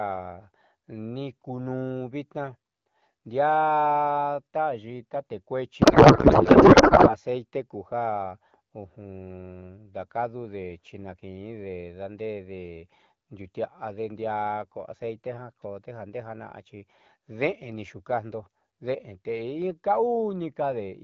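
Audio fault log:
5.81–7.17 s, codec payload misread: the speech turns to garbled noise and warble that barely tracks it. The AMR decoder is reading octet-aligned frames as bandwidth-efficient, so every field comes from the wrong bits. A spectrogram shows harmonic striations dissolving into smeared broadband hash.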